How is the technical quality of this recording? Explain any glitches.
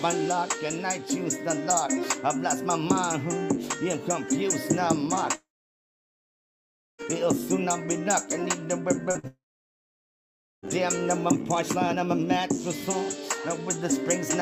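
The recording is degraded by packet loss, with two long gaps and a cluster of shorter losses just before the second gap.

Long network dropout, 5.35 to 7.01 s and 9.27 to 10.65 s: the sound stops, a brief fading continuation of the last sound gives way to about 1.5 s and then about 1.2 s of silence, and it resumes further on with that stretch missing. The likely cause is a stall in the incoming stream that the receiver could not bridge.

Short concealed packet loss, 9.11 to 9.18 s: about 40 ms of audio failed to reach the decoder in time. The receiver extended the preceding sound across the hole and blended back into the real signal, which is heard as a brief smear or wobble.

Burst of packet loss, 9.19 to 9.26 s: another 40 ms was lost immediately afterwards. The receiver continued the last sound while turning it down, so a short fading buzz or hiss replaces the missing audio just before the second long dropout begins.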